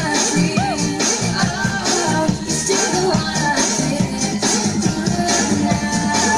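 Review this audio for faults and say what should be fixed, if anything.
No faults; nothing needs fixing.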